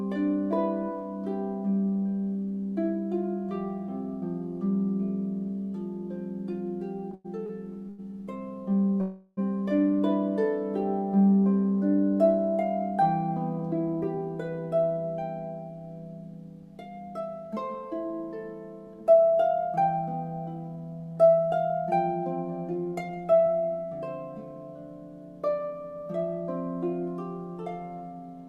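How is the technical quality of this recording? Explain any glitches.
The recording has network-delivery problems: a stretch of stuttering, one freeze, and three passages that run noticeably fast.

From 7.11 to 8.00 s the audio catches and drags in four small hitches, the longest about 100 ms, with roughly a quarter of that span filled in. These are repeated stalls (stutter): packets arrived late, the jitter buffer kept running dry, and the receiver stretched the last sound to cover each gap. Nothing is lost, but the flow judders.

At 9.01 s the sound hangs for about 360 ms, holding a smeared continuation of what came before with no drop to silence, then picks up where it left off. This is likely a call audio freeze, with packets held up in transit so the receiver had to improvise until they arrived. The pause adds delay rather than removing content.

Three passages sound hurried at unchanged pitch: 13.61 to 14.18 s and 18.87 to 20.77 s, both about 7% fast, and 22.71 to 23.47 s, about 11% fast. 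This is jitter buffer speed-up. Audio piled up in the buffer beyond its target, and the receiver trimmed many tiny pitch-period slices to catch up. That cut a few hundredths of a second in the first passage, about 0.15 s in the second and about 0.1 s in the third.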